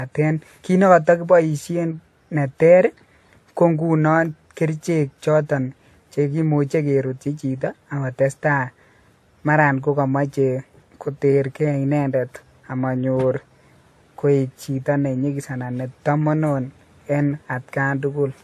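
Throughout the speech, the likely cause is transcoding between lossy codecs, consistent with a WMA encode re-encoded as AAC-LC. Nothing remains above 13 kHz, so the top sounds dull, and the second encoder's artefacts layer over the first's.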